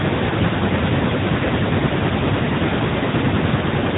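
Throughout, the speech carries AMR narrowband mobile codec damage: nothing above 3.8 kHz survives, and the low-rate vocal-tract model, likely AMR-NB at 10.2 kbps, leaves a plainly buzzy, synthetic quality.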